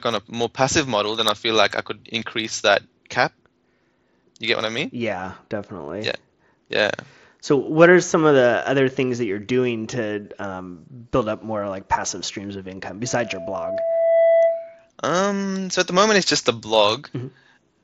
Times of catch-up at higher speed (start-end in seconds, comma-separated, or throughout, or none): none